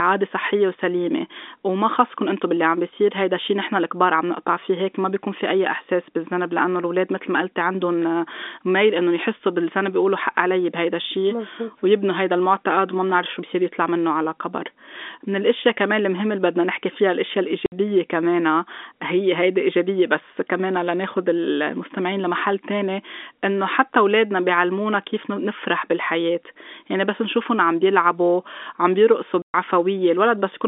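A telephone-band speech recording, carried through G.711 telephone coding with its narrow line band of roughly 250 Hz to 3.6 kHz, is broken twice by packet loss filled with silence: a 60 ms hole from 17.66 to 17.72 s and a 120 ms hole from 29.42 to 29.54 s. Both gaps fit whole 20 ms packets being dropped and replaced with nothing. On the waveform each shows as a dead-flat line with abrupt cut-offs, and on a spectrogram as a blank vertical stripe with sharp edges.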